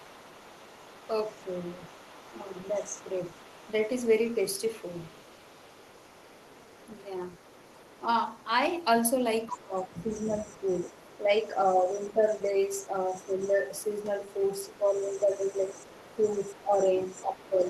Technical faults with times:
0.00-8.44 other side's voice leaking through
2.48-2.95 speech suppressed in double talk
9.42-17.70 other side's voice leaking through
9.49-13.91 speech suppressed in double talk
14.64-15.71 speech suppressed in double talk
16.10-17.68 speech suppressed in double talk

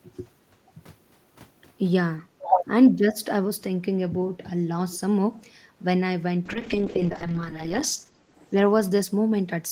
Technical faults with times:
2.38-2.55 speech suppressed in double talk
4.92-4.97 echo leak
6.46-9.16 call bitrate drop

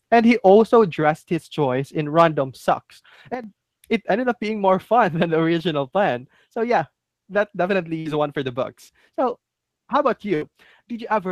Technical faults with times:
3.34-3.44 sudden gain jump
7.99-8.08 burst of packet loss
10.35-10.52 burst of packet loss

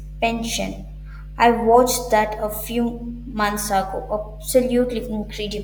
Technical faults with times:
0.00-5.64 mains hum

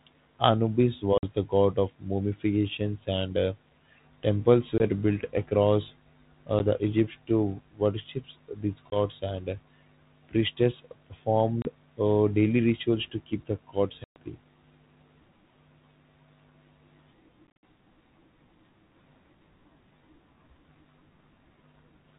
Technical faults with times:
1.18-1.24 packet loss on an ADPCM call
4.78-4.84 packet loss on an ADPCM call
6.59-6.61 packet loss on an ADPCM call
8.90-8.97 packet loss on an ADPCM call
11.62-11.68 packet loss on an ADPCM call
14.04-14.16 packet loss on an ADPCM call
17.48-17.63 packet loss on an ADPCM call

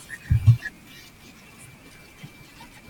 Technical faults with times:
0.00-2.89 wrong sample rate

